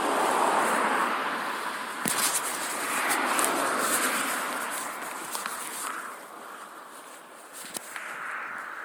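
Generation loss runs throughout: swirly, hollow, smeared sound with blurred attacks, likely from about seven repeated MP3 passes at roughly 96 kbit/s, with nothing above 19.9 kHz.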